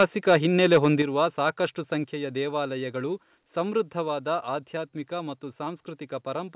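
From 0.0 to 0.36 s and again from 0.64 to 0.86 s the loudest speech turns harsh and crackly, with flattened, gritty peaks instead of clean ones. This is microphone overload: the input was likely set so hot that the peaks ran past the converter's ceiling, by about 6 dB in the first stretch and about 4 dB in the second. A few percent of samples were sheared flat, and that produces the raspy edge.

Then the level drops abruptly, in three clean steps at 1.02 s, 2.04 s and 4.08 s. Voice and background fall together, by about 6 dB, then about 4 dB, then about 2 dB. The last step lands just before "ಆಧ್ಯಾತ್ಮಿಕ ಮತ್ತು". Each is a microphone volume stepped down event, likely the call software reacting to the earlier clipping by cutting the device's input gain in one jump rather than gradually. The call path itself carries nothing above 4 kHz, which fits a narrowband G.711-type codec.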